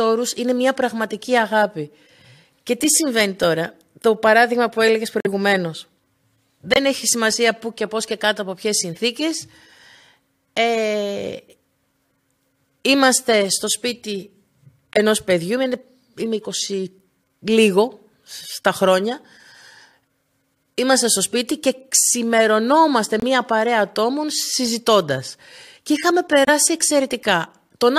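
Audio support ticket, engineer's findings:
Corrupt frame muted: abrupt silent holes in the speech at 5.20–5.27, 6.74–6.78, 14.93–14.97, 23.20–23.24 and 26.45–26.49 s. Decoder rejected damaged compressed frames; player inserted silence. Timing intact.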